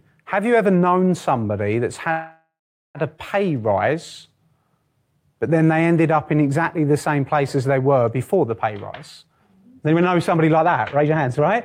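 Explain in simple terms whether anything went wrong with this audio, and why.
Yes, two things went wrong in this speech clip.

First, a call audio freeze, from 2.11 to 2.98 s. The sound stalls and stretches the last bit of audio into a fading buzz or hiss. Then it goes quiet for about 0.41 s. This likely happened because packets of audio were held up on the way. The receiver ran out of audio to play and filled the wait, about 0.83 s in all. When the audio returns, it picks up where it stopped, so nothing is lost.

Second, a jitter buffer speed-up, from 9.22 to 11.56 s. The speech runs at about 125% speed but keeps its normal pitch, so it sounds hurried. The receiver had built up too much waiting audio. To catch up, it cut out many tiny slices of sound in a row, about half a second in total.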